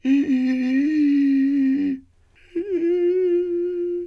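No technical faults are audible anywhere in the music.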